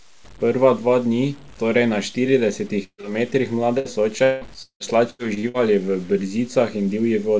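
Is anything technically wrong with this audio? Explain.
Yes. There are four kinds of fault.

Low bit depth without dither runs through the whole clip. Its grain points to roughly 7 bits, likely truncated with no dither. Because the rounding error tracks the signal, quiet speech turns gritty. The distortion sits around 30 dB below the signal.

A burst of packet loss occurs from 2.84 to 3.01 s, and another from 3.78 to 3.88 s. In the first, about 150 ms never arrived. The receiver stretched the last sound for about 141 ms, fading it, and then went silent for about 50 ms. In the second, about 60 ms is missing, covered by a 66 ms fading fill. Speech then resumes further on.

Short concealed packet loss follows directly, from 3.01 to 3.06 s. Roughly 30 ms was lost. A 21 ms extension of the previous sound patches the hole before blending back. It is heard as a brief smear.

Repeated packet loss (robotic sound) covers 4.24 to 5.57 s. 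Six gaps total about 570 ms, the longest 177 ms. Concealment fills 42% of that stretch. The repeated patching makes the speech choppy, with pieces missing.

The call path's codec passes nothing above 8 kHz.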